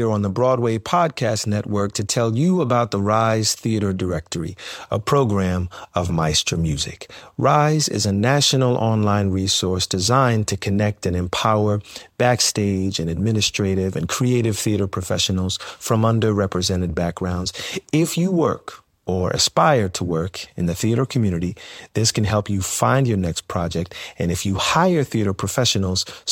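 No technical faults are audible anywhere in the speech.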